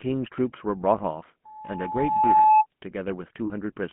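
Speech, squeezed through the GSM full-rate codec all the way through, and the damage is plain: a buzzy, gravelly roughness sits on the speech, with nothing getting through below about 150 Hz or above about 3.4 kHz. That's the signature of the old 13 kbps full-rate coder rebuilding the speech from a vocal-tract model and a sparse pulse excitation. There are two stretches of lost GSM frames. The first runs from 0.98 to 1.01 s and the second from 3.46 to 3.51 s. Each time, the sound freezes into a brief metallic, ringing hold as the decoder repeats the last good frame. The first sounds like a single 20 ms frame and the second like about 40 ms. From 1.45 to 2.66 s there's a loudspeaker feedback squeal, a single tone at 862 Hz that swells over roughly a second until it sits around 10 dB above the speech. The microphone was picking up its own loudspeaker, and the loop gain went above one at that frequency.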